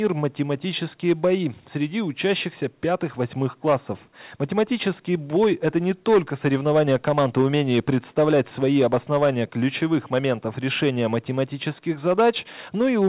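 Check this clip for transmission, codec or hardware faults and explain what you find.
No transmission, codec or hardware faults can be heard.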